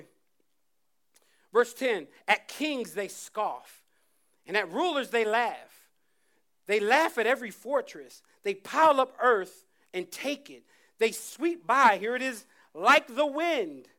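Nothing stood out on listening to this speech recording.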